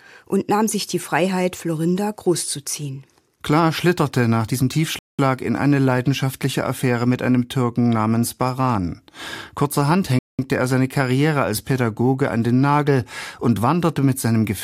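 A gap between chunks breaks the speech twice, from 4.99 to 5.19 s and again from 10.19 to 10.39 s. Each hole lasts 200 ms and the two fall about 5 s apart, which points to audio delivered in 5-second pieces with silence inserted at each join. Nothing is missing from the speech itself; it simply stops dead and resumes, so the pauses have abrupt, hard edges rather than a natural fade.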